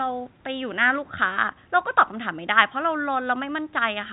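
A speech recording, with nothing technically wrong to be heard in it.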